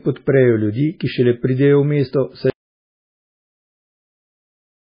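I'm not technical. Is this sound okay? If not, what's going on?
No. Two things are wrong with this speech clip.

First, the whole recording carries heavy MP3 compression damage, likely from being saved as a very small MP3 file. To save space, the encoder threw away everything above 5 kHz, so the sound is dull and muffled, without the crispness of s and t sounds. It also dropped quieter details that flicker in and out moment to moment, giving the speech a watery, swirly quality and smeared starts of sounds.

Second, at 2.5 s, right after "šele pridejo v mesto", there is an audio dropout to silence lasting until the end of the clip. The sound simply cuts off, and the gap is completely silent with no background noise at all. That points to the input being lost while recording continued, likely through a disconnected device, a failed connection or an accidental mute. Whatever was said after that point is missing.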